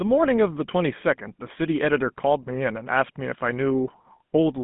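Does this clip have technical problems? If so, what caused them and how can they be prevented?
Yes. GSM full-rate codec damage runs through the whole clip. The speech has a plainly audible buzzy, gravelly roughness because the voice is rebuilt by driving a vocal-tract model with a coarse, regularly spaced pulse excitation, which fits 13 kbps full-rate coding. On a spectrogram the energy sits in a telephone band of 150 Hz to 3.6 kHz, with nothing above 3.8 kHz. To prevent it, record over a wideband or direct digital path instead of a GSM phone call.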